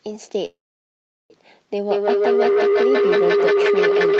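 A speech clip with two faults. From 0.45 to 1.32 s the audio stalls in a call audio freeze. The last sound hangs on briefly as a fading buzz, then about 0.74 s of near silence follows. The likely cause is packets held up in transit, draining the jitter buffer. When sound resumes it picks up where it left off. Nothing is lost, but a gap of about 0.85 s has been inserted. From 1.91 s to the end, a feedback howl builds. Two devices on the same call share a room, and the loop between microphone and loudspeaker gains level on every pass. The repeats narrow to a tone around 400 Hz and come round roughly every 150 ms. The howl peaks about 7 dB above the speech and never breaks, because the loop is never broken. The sound has no content above 8 kHz, which fits the call's band limit.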